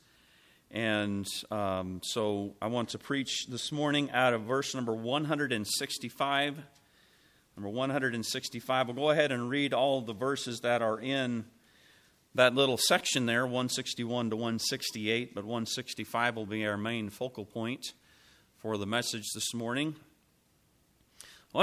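No technical faults can be heard in this recording.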